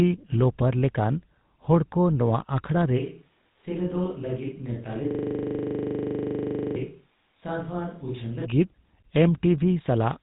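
Throughout, the speech has passed through the GSM full-rate codec. The encoder reduces the voice to a vocal-tract filter driven by a sparse, regularly spaced pulse excitation, and it discards everything above about 3.8 kHz. The damage is plainly audible, which fits a 13 kbps GSM stream. The voice comes across buzzy and gravelly, with a grainy roughness over every syllable and a dull, band-limited top end with no air or sibilant sparkle.

From 2.99 s, right after "ᱦᱚᱲᱠᱚ ᱱᱚᱣᱟ ᱟᱠᱷᱲᱟ ᱨᱮ", the close pickup drops out and the audio likely switches to a distant microphone, such as one on a camera, until 8.44 s. The change is abrupt in both directions. During that stretch the voice falls by roughly 10 dB and turns hollow and roomy, with thinner bass, and a faint layer of room noise rises well below the speech before the close, fuller sound snaps back.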